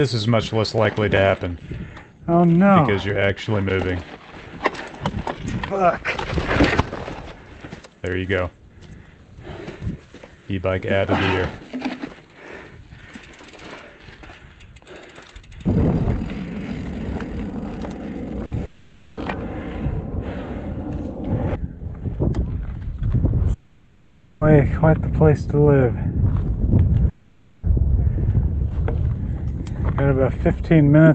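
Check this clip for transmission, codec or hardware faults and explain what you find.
There are transmission faults: one short burst of packet loss and three longer gaps, heard over a call codec that limits the band to 8 kHz, which fits Opus at about 32 kbps.

At 18.45–18.53 s, a burst of packet loss: about 60 ms went missing, and the receiver stretched the last sound and faded it briefly. On a spectrogram it shows as smeared, repeated frames with no new detail.

At 18.65–19.19 s, 23.53–24.43 s and 27.09–27.65 s, the sound is replaced by a fading hold with no hard silence, most likely a long network dropout. The spectrogram shows decaying flat streaks, and the waveform shows a shrinking repetitive envelope before the sound resumes further on.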